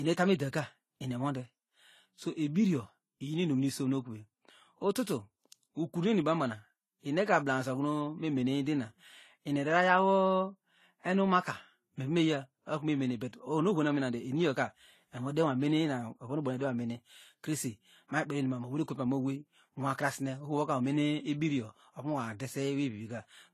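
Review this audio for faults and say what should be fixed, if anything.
Throughout the speech, the high end stops dead at 14 kHz, and two different kinds of compression damage sit on top of each other and are heard together. This is likely transcoding between lossy codecs, with the sound pointing to a low-rate Vorbis encode, around 33 kbit/s, that was then re-encoded to AAC-LC at about 48 kbit/s. The second encoder spent its limited bits reproducing the first one's artefacts and added its own. On a spectrogram, expect a hard horizontal ceiling at 14 kHz and patchy, holed energy in the upper bands. To prevent this, encode once from the original uncompressed master rather than converting one lossy file into another.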